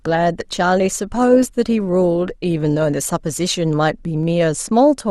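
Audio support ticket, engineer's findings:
Dull, band-limited sound with smeared, synthetic-sounding highs and heavier codec artefacts from 0.00 to 3.61 s, then an abrupt, gapless jump in clarity. Adaptive stream starting at a low bitrate: the player opened on a lean variant, which fits around 32 kbit/s, then switched up, which fits around 64 kbit/s, once throughput was measured.

Single sharp clicks at 1.89 s, 3.02 s and 4.23 s, each a thin vertical line across the spectrum, no audible loss of content. Likely dropped samples: a handful of samples (a fraction of a millisecond) missing, so the waveform jumps discontinuously.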